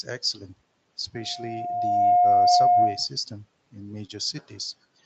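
From 1.15 s to 3.07 s, a loudspeaker feedback squeal rises over the speech. A single tone near 711 Hz swells for about a second. It then sits roughly 15 dB above the speech before stopping at 3.07 s. The microphone is hearing the loudspeaker it feeds. At this one frequency the loop gain passed one, so the tone kept feeding itself. The sound stays band-limited, with nothing above 8 kHz, which fits a wideband call codec.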